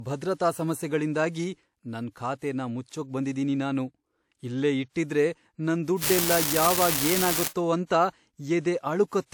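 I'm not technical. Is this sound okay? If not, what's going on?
No. Low-bitrate audio saved at a high bitrate runs through the whole recording. The speech still carries the blemishes left when a file is squeezed hard to make it small. The likely cause is an earlier compact, lower-quality copy that was later re-saved as a larger, higher-quality file. Making the file bigger can't bring back detail the first squeeze threw away, so those blemishes stay.

An unreliable data bit appears from 6.02 to 7.48 s, starting just after "ಇಲ್ಲೇ ಇಟ್ಟಿದ್ರೆ ನನ್". For about a second and a half a steady crackle or fizz sits on top of the sound and carries on through any pauses. One of the connections carrying the digital signal is flaky, so in a random share of samples a single piece comes out wrong, and every error becomes a click of the same size.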